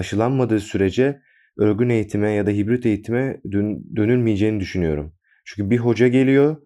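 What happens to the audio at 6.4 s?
At 6.4 s the resampler is restarted on every block, as it is across the whole clip. The sample-rate converter, which fits a conversion from 44.1 kHz to 48 kHz, treats each 20 ms block in isolation and never sees the true neighbouring samples at the block edges, so every boundary picks up a small error. Those errors repeat at 50 Hz, giving a low buzz under the speech that is present only while there is signal.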